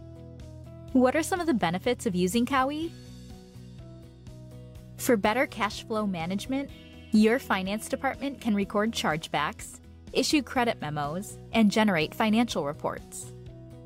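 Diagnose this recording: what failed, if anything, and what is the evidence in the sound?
A single sharp click at 1.89 s is the only fault, and it points to dropped samples, most likely at the driver or buffer stage, where a handful of samples failed to reach the stream. The missing stretch, a small fraction of a millisecond, removes no audible sound, but the waveform jumps abruptly from one value to a later one. On a spectrogram this shows as a thin vertical line spanning the frequency range at that instant.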